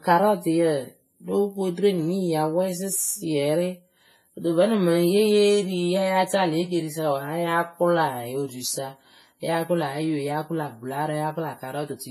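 From start to finish the speech has likely passed through heavy WMA compression, a transform codec working with long blocks and a simple encoder. With too few bits to go around, its quantisation noise smears across tens of milliseconds and weak spectral lines are dropped entirely, which fits a stream of roughly 24 kbps. The result is ringing, washy speech with a hiss that swells and fades along with it, and nothing above 15.4 kHz.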